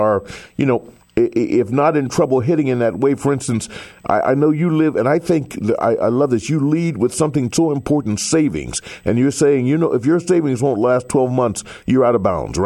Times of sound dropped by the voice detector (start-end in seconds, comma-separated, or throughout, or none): none